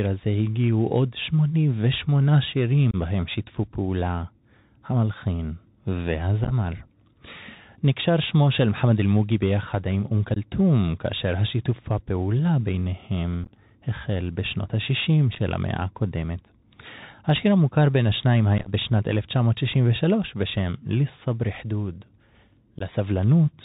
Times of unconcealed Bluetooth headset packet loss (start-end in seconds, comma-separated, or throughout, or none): 2.91-2.95, 6.44-6.52, 10.34-10.38, 13.44-13.51, 15.33-15.39, 18.58-18.70, 22.79-22.82